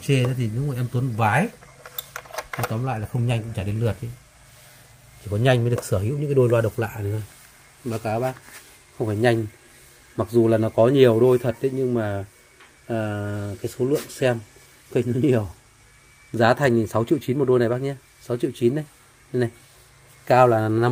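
No technical faults can be heard anywhere in the audio. Nothing in it points to a problem at any moment.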